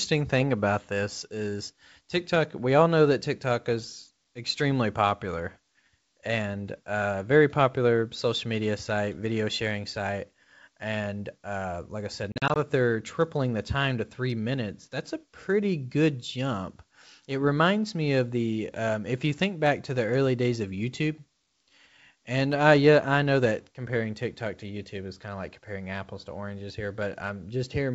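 Right after "uh like I said", from 12.32 to 12.57 s, there's packet loss on an ADPCM call. About 120 ms goes missing in hard-edged silent gaps spread over 240 ms, none longer than 40 ms, before "that they're tripling the". Each gap knocks the decoder's predictor and step size out of sync with the sender's.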